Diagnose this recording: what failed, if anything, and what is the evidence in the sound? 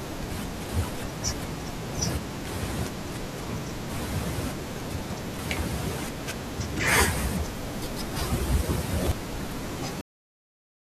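Processor overload crackle at the driver and buffer stage, from 4.8 to 5.42 s and again from 9.02 to 9.44 s. The processor repeatedly missed deadlines for very short buffers, each replaced by stale audio with hard edges, giving gritty tearing over the speech. Unlike a single dropout, it is a dense run of tiny glitches that stops when the load eases.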